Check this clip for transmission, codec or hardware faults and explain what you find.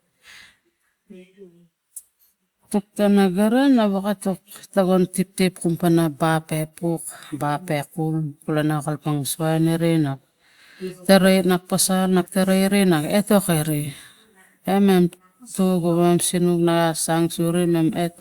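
No transmission, codec or hardware faults are audible anywhere in this speech recording.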